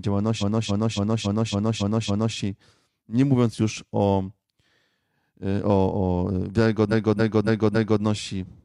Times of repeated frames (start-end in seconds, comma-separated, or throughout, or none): 0.37-2.33, 6.88-7.99